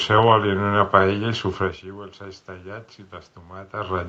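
Nothing in this speech clip stood out as a technical fault on listening.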